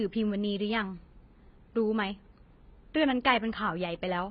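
Speech with heavy AAC compression throughout, nothing above about 5.2 kHz, dull and smeared with fizzy sibilants, likely from AAC-LC coding at a very low bitrate around 16 kbps.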